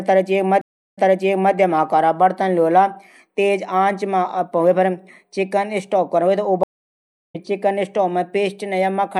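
At 0.61 to 1.55 s and again at 6.63 to 7.36 s the speech suffers a stream reconnect: the connection drops and a new decoder restarts mid-stream. The first gap lasts 356 ms and resumes 576 ms earlier, repeating speech. The second lasts 707 ms and resumes roughly 0.7 s later, skipping speech.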